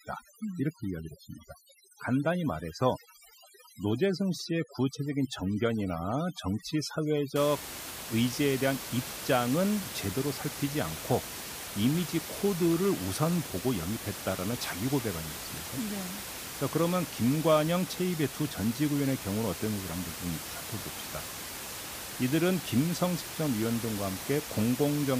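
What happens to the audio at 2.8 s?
At 2.8 s the speech is under overdone noise removal, which runs from the start to about 7.36 s. The reducer is set too hard, cutting frequency bands near its noise estimate down to nothing. The quiet background dissolves into twinkling specks.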